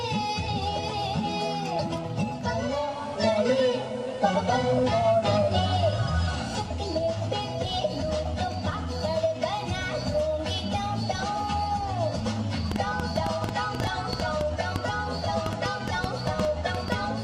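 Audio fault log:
2.80–6.56 s, digital radio blending to analogue: the receiver loses its digital stream and cross-fades over about 220 ms to the FM broadcast of the same station, then fades back. Hiss rises to roughly 35 dB below the programme and the level shifts by about 4 dB. A spectrogram shows a raised noise floor across the span; the waveform steps in level at each blend.
12.72–16.93 s, train of clicks: sharp, similar pulses arrive at about 5.9 per second with uneven spacing, around thirty in all, each peaking roughly 15 dB above the surrounding audio, so they tick over the sound and through its pauses. The likely cause is interference from nearby equipment or a faulty connection or power supply. On a spectrogram they form thin vertical lines spanning all frequencies; the waveform shows narrow spikes standing clear of the signal.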